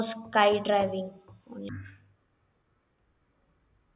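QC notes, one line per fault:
1.69–3.96 s, wrong sample rate: speech drops a full octave and runs at half speed, which fits 16 kHz audio played back at 8 kHz without conversion.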